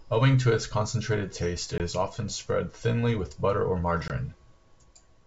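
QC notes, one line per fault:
1.78–1.81 s and 4.08–4.11 s, packet loss on an ADPCM call: two hard-edged gaps, each about 20 ms of missing audio, consistent with a single lost packet. The first falls between "its concentrated taste it" and "is often spread thinly". The second follows "thinly with butter or". Silence fills each hole. The decoder's predictor and step-size state then no longer match the encoder's, so the speech resumes slightly distorted before resynchronising. The wideband G.722 path stays clear up to 7 kHz, which fits its 64 kbit/s mode.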